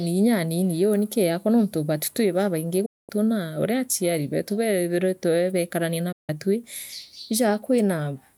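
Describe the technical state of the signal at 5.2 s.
At 5.2 s the speech signal is intact, with no audible technical fault at that moment.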